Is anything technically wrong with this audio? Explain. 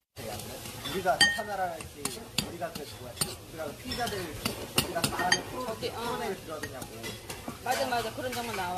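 Yes. Throughout, these sounds show generation loss, likely from around ten repeated AAC passes near 64 kbit/s: stacked quantisation leaves swirly, hollow smearing, blurred attacks, and nothing above 14.1 kHz.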